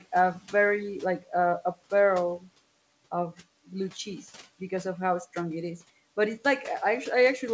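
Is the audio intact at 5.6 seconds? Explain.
Yes, the audio is intact at 5.6 seconds, with no fault present at that moment.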